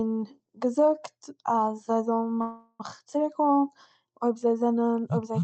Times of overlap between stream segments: none

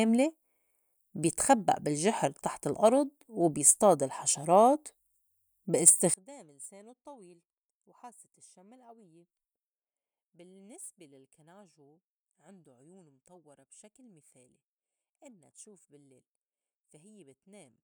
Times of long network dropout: none

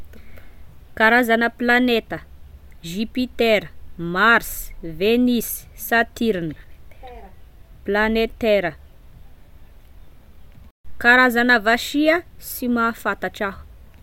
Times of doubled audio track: none

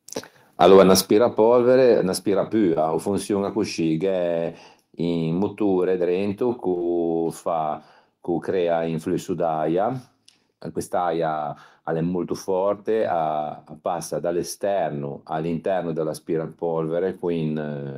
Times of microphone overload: 0.61-0.94

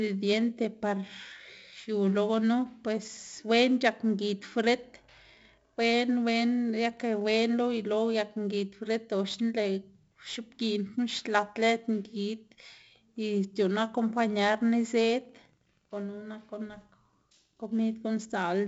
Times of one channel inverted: none

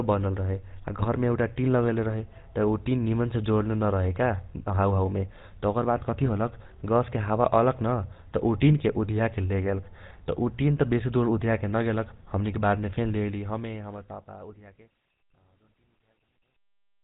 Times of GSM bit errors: 0.99-1.06, 6.22-6.30

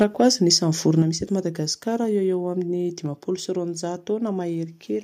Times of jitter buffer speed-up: none

